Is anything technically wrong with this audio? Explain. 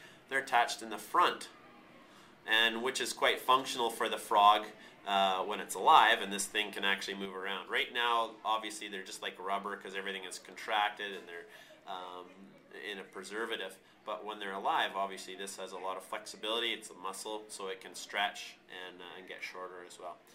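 Yes. At 7.25 s there is a sudden gain jump. The level drops by about 5 dB in one step and stays there to the end, with the sound and background noise falling together. The likely cause is a gain change applied without a ramp. On a waveform, the envelope steps down abruptly. A spectrogram darkens across all bands at that instant.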